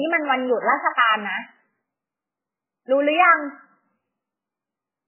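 MP3 compression damage runs through the whole of this speech clip, and it is heavy. Nothing reaches above about 3 kHz, so the top of the sound is sharply cut away, which fits a very low bitrate of around 8 kbps. With so few bits, weak frequency lines drop in and out from frame to frame, giving the sound a watery, swirling quality. Sibilants come out as metallic chirps, and onsets are smeared. The likely cause is starved MP3 encoding.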